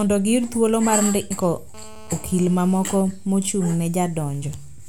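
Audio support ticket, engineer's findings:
GSM phone buzz, 1.74–3.02 s: hard raspy buzz at 217 Hz, about -24 dB, steady. Spectrogram shows evenly spaced harmonic ladder. Cause: audio circuit rectifying handset transmit bursts.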